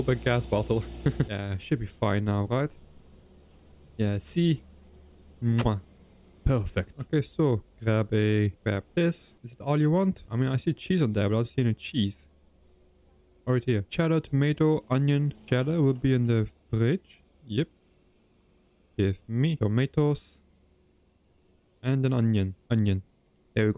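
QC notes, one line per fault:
No technical faults are audible anywhere in the clip, and the signal path sounds intact throughout.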